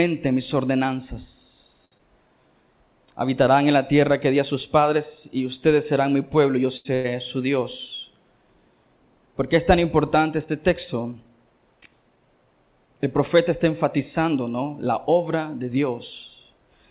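At 1.85 s the sound holds on too long for about 66 ms, with a faint buzz or dip, until 1.95 s, and then carries on from exactly where it stopped. This is a short stall from a late packet. A packet missed its playout time, the jitter buffer ran dry, and the receiver stretched the last sound rather than skip ahead. Nothing is lost, but the call's delay grows by the same 66 ms. A second stall at 6.77 to 6.93 s sounds the same but holds for about 82 ms.

From 1.98 to 2.02 s there is a quick smear, where about 30 ms of audio simply disappears. This is short concealed packet loss. That stretch never reached the decoder in time, so the receiver filled roughly 13 ms by continuing the previous sound, then blended back into the real signal further on. Skipping ahead this way also trims the delay slightly.

Between 2.21 and 2.49 s the audio drags at about 89% of normal speed, with the pitch unchanged and sounds drawn out. 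This is a jitter buffer slow-down. With its reserve low or its target delay just raised, the receiver repeated single pitch periods and slivers of pauses many times in a row, adding about 37 ms to rebuild the buffer.

Straight after the second stall, from 6.95 to 7.07 s, a held buzz or fading hiss replaces the audio, and the sound resumes further along with about 90 ms missing. This is a burst of packet loss. Consecutive packets were lost or arrived too late to play. The receiver extended the last sound for about 94 ms, turning it down as the gap went on, then jumped to the next audio it actually had.

At 11.04 to 11.87 s, and again at 14.61 to 15.76 s, the audio sounds hurried at the same pitch, about 10% and 7% fast respectively. These are jitter buffer speed-ups. The buffer was holding more than its target, as happens when delayed packets arrive in a cluster. To cut the excess latency, the receiver removed short pieces of one or a few pitch periods again and again, about a tenth of a second in each passage.

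Throughout, the audio has the dull, band-limited sound of a G.711 mu-law call path, with nothing above 4 kHz.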